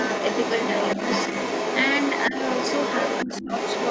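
From 0.0 s to the end, a second voice runs underneath the speech at roughly equal loudness. This is the other side's voice leaking through, likely loudspeaker echo the echo canceller failed to remove. At 2.3 to 2.35 s the speech dips by about 10 dB, and at 3.25 to 3.49 s it drops far deeper, about 25 dB. This is speech suppressed in double talk: with both sides sounding at once, the canceller likely turned the talker down along with the echo.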